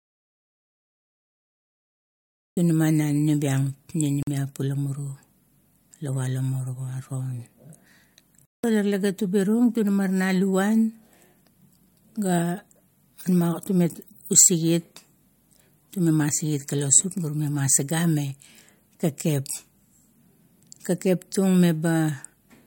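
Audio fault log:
0.00–2.57 s, audio dropout to silence: the clip opens in total silence with no room tone, and the speech cuts in abruptly at 2.57 s. The likely cause is a lost input while recording continued writing silence. The waveform is a dead-flat line and the spectrogram is fully black.
4.23 s and 8.45 s, block of digital silence: hard gaps of 46 ms and 186 ms, which fit unfilled 2048- and 8192-sample buffers. The waveform shows flat silent stretches with vertical steps, and the spectrogram shows black bars between thin broadband lines.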